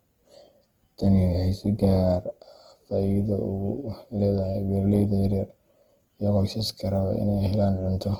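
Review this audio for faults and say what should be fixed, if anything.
Opus compression damage runs through the whole speech clip. The voice has a rough, grainy texture with noisy fill where detail should be. Bands are kept filled rather than hollowed out, so there is little swirling. Bandwidth stays full, reaching about 20.2 kHz, so the harm lies in texture, not dullness. This is likely Opus in its CELT music mode starved of bits, which fits a rate near 16 kbps. To prevent it, encode speech at a higher bitrate or use the encoder's voice setting.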